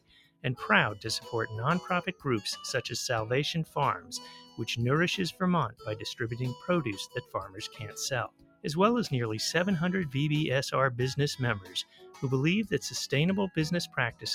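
A noise suppressor built for speech was left running on audio it wasn't designed for, so it keeps mistaking sustained tones, ambience and decay for noise. Throughout the clip this noise suppressor applied to music or sounds makes the level swing by around 10 dB as the suppressor clamps down and lets go. Onsets survive while anything held sinks behind them, giving a pumping, thinned-out texture.

At eight points the suppressor cuts the sound much harder than elsewhere. These are the clearest cases of sound cut by the noise suppressor: 0.0 to 0.45 s (down about 20 dB), 2.09 to 2.26 s (about 15 dB), 4.0 to 4.62 s (about 13 dB), 5.69 to 5.87 s (about 19 dB), 7.07 to 7.97 s (about 13 dB), 8.28 to 8.66 s (about 20 dB), 11.6 to 12.23 s (about 16 dB) and 13.87 to 14.25 s (about 17 dB). Each time, the steady or fading material sinks in level and tails are chopped short, while sudden sounds mostly come through.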